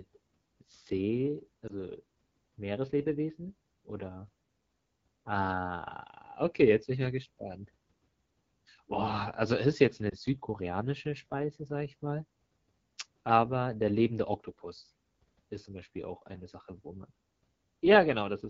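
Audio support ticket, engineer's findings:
Speech band-limited near 7 kHz, raspy and rough for the whole clip. Probable component: AMR wideband (HD Voice) codec at a low rate, which fits 8.85 kbit/s, the second-lowest mode. Too few bits for the pulse excitation, so the voice is coarse. The top band is filled with shaped noise. Differs from packet loss: the damage is constant, not in bursts.

Brief dip or warble, 1.67 to 1.73 s. Probable component: lost AMR speech frames, which fits one bad 20 ms frame. The decoder repeats the last pitch and vocal tract settings at falling gain.

Same symptom, 10.10 to 10.14 s, right after "also es ist jetzt". Same mechanism. Differs from a hard dropout: there is no clean silence, just a brief dip.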